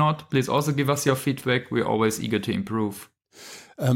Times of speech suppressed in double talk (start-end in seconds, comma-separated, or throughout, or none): none